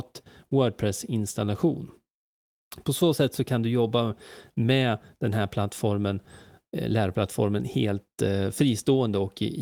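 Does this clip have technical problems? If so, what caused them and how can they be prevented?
No, nothing in this speech recording stood out as a technical problem on listening, so there is nothing to trace or prevent.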